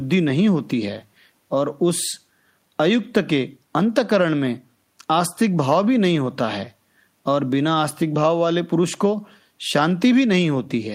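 Nothing technically wrong turns up in this bit of recorded speech; there's no fault to point to at any moment.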